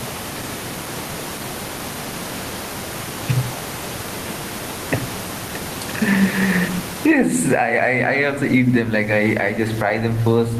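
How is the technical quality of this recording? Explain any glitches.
The recording's main problem is gain pumping throughout the speech. Gain pumping, across the whole clip, most likely comes from a fast compressor clamping down on each loud syllable, swinging the level by around 20 dB, with the room noise about 29 dB below the speech.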